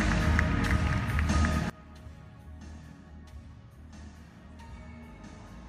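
From about 1.70 s right through to the end, the sound collapses to roughly 20 dB quieter. That's the classic signature of one channel inverted: with one side's polarity flipped, everything shared between left and right cancels when the two are summed to mono, leaving just the faint difference between them. Polarity reversal is the likely cause here.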